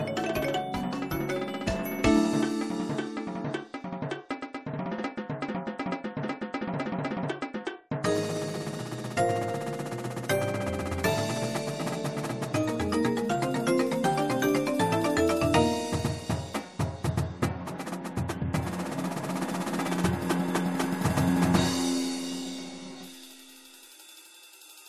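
Nothing stood out as a technical fault on listening.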